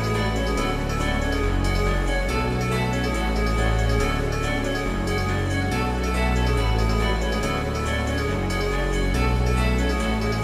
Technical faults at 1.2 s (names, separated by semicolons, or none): none